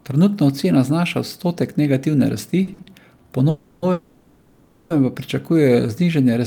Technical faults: repeated stalls (stutter); call audio freeze; jitter buffer slow-down

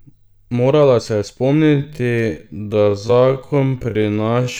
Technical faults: time-stretched section

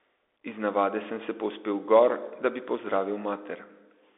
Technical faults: Bluetooth CVSD headset codec

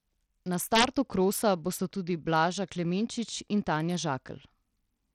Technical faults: Bluetooth SBC compression; integer overflow

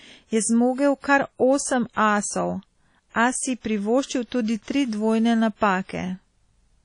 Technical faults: WMA compression; pre-echo

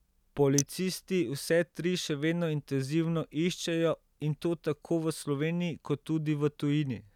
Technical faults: electrical switching spike

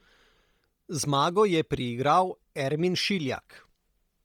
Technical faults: Bluetooth LC3 compression

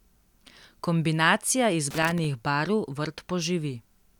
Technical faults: loose connector crackle

